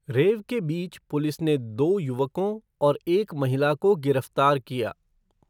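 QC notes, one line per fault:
Nothing to flag here; the speech comes across without a single technical problem worth noting.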